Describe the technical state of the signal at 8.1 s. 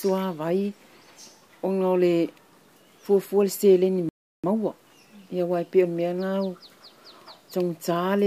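At 8.1 s the signal is intact, with no audible technical fault at that point.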